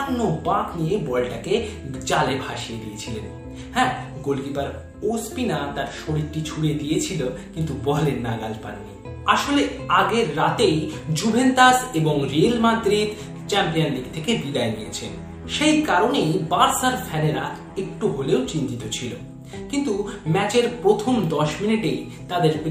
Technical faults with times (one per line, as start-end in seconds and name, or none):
none